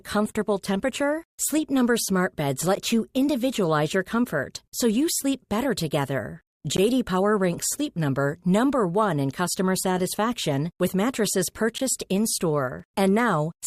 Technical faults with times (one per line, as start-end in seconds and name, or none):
2.75 gap between stream segments
6.77 gap between stream segments
11.78 gap between stream segments
12.80 gap between stream segments